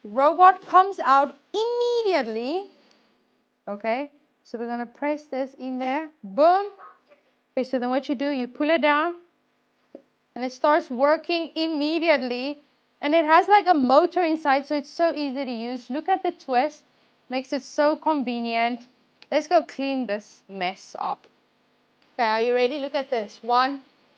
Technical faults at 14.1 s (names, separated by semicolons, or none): none